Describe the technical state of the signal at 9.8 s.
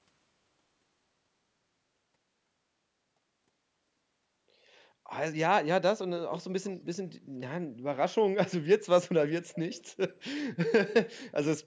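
An echo leak is audible from 9.53 to 9.84 s, so 9.8 s falls near its end. A faint delayed copy of the speech, trailing it by 239 ms and sitting roughly 20 dB below it, surfaces briefly as a detached repeat. The likely cause is a far end on loudspeaker whose echo canceller let part of its microphone's pickup of this speech slip through and return down the line, within the call's band that stops at 8 kHz.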